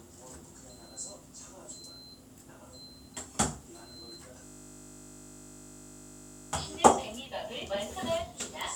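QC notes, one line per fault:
4.45–6.53 s, system hang loop: The computer or its audio driver froze while the sound hardware kept replaying the same 20 ms stretch of its ring buffer, about a hundred times over. Because the looped piece is so short, it repeats 50 times a second, so the sound gives way to a steady, flat buzz pitched at 50 Hz. The buzz stops abruptly once the system recovers and fresh audio reaches the buffer again.
7.26–7.95 s, drift correction step: The sound abruptly slows by about 5.4% and drops in pitch by roughly 95 cents, close to a full semitone, then snaps back to normal speed and pitch. The likely cause is clock-matching software that changed the playback rate in a single step to refill its buffer. Because speed and pitch move together, the passage sounds briefly detuned and sluggish.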